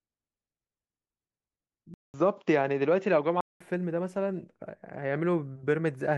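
At 1.94 s the speech cuts out for 200 ms, then returns duller and boxier, with nothing above 7.2 kHz, a faint new hiss well beneath it and much the same loudness, until 3.61 s. The input was likely switched to a poorer device.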